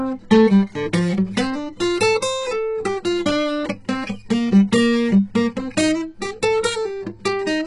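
From start to finish, the music carries heavy HE-AAC compression artefacts. The likely cause is HE-AAC coding at a very low bitrate, something near 12 kbps. Only the lower spectrum is coded properly. The treble is rebuilt by copying lower bands upward. Those copies don't match the real harmonics. So the top end sounds gritty and metallic. Cymbal-like content turns hashy and lispy. Nothing sits above about 11.1 kHz.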